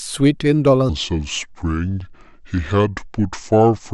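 From 0.89 s to the end at 3.94 s, the speech falls into a section at the wrong speed, playing at about 0.70 times its recorded rate, most likely because that stretch was resampled or clocked against the wrong rate. The speaking turns slow and dragging while dropping about seven semitones into a deep, heavy register. Unlike a pure pitch shift, where timing stays intact, the pace and the pitch sink together here.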